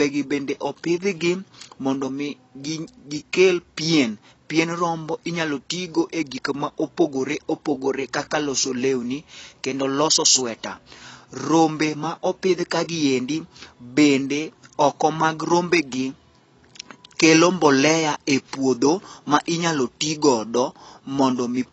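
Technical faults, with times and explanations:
Throughout, AAC compression: the speech sounds dull, with nothing above 8 kHz, and sibilants and sustained sounds carry a warbly, fizzy smear. That's likely an AAC-LC encode at a low bitrate, and the damage fits something around 24 kbps, where the encoder drops the top band and thins out the rest.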